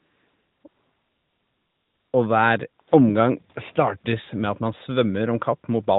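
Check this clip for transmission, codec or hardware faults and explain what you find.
One fault type appears: AMR comfort noise, in three stretches: 0 to 0.64 s, 0.68 to 2.14 s, and a brief 60 ms gap at 2.82 to 2.88 s. During these pauses the sending phone decided nothing was being said and stopped transmitting speech frames. The receiving end filled the silence with synthetic noise built from a rough estimate of background level and spectrum. The real background gives way to a smooth, even hiss that switches in and out at each boundary. The narrowband AMR path carrying the speech stops everything above 4 kHz, with only light coding damage.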